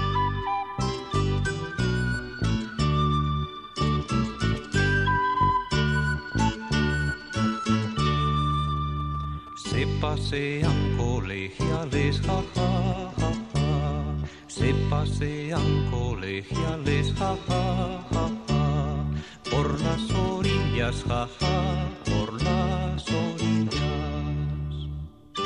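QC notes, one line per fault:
8.53 to 9.49 s, GSM signalling bursts: a nearby 2G phone's brief radio bursts, rectified by the audio circuitry, cause galloping ticks and 217 Hz buzzing, roughly 25 dB below the sound.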